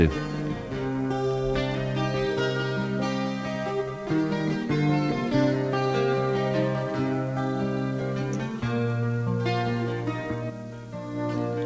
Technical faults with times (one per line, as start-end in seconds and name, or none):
none